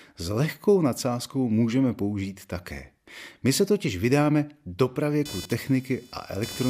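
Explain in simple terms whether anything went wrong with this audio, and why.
From 5.25 s to the end, a buzz sits under the speech. This is computer activity noise. The computer's working parts disturb the shared electrical ground of the audio gear. The buzz pulses roughly 500 times a second and follows the computer, not the speech.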